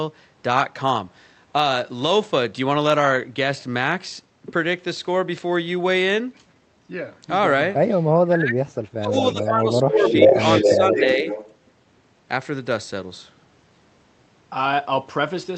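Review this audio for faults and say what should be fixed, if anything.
Speech suppressed in double talk: while both ends were talking at once, the echo canceller likely could not separate the local talker from the loudspeaker echo and turned the whole signal down. The speech dips sharply between 8.23 and 9.13 s, by up to about 35 dB, so it nearly disappears. It drops again by about 15 dB from 9.33 to 10.37 s. Shallower dips of about 5 dB follow at 10.61 to 10.95 s and 11.16 to 11.28 s. To prevent this, tune the double-talk detection so that near-end speech is kept at full level whenever both sides talk.

Echo leak: an echo canceller at the loudspeaker end likely failed to remove everything its microphone picked up, and the leftover was sent back down the line. A delayed copy of the speech arrives about 0.41 s late. From 9.98 to 11.04 s this returning copy is about 5 dB louder than the direct speech, and it overlaps the dips described above. 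From 11.28 to 11.56 s it comes back weaker, at about 10 dB below the speech. To prevent this, give that canceller a longer adaptive filter and stronger residual-echo suppression so it can cancel a delay of about 0.41 s.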